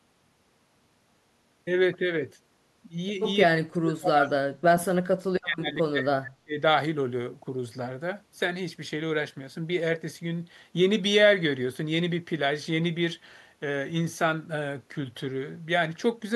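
A speech recording in which the talker's level collapses from 3.47 to 6.55 s, falling by about 40 dB at its deepest, so the speech sinks to near silence or breaks up for about three seconds before returning at full level. This is speech suppressed in double talk, likely the result of an echo canceller that met simultaneous talk from the far end, could not tell the near talker apart from its own loudspeaker echo, and clamped everything down together.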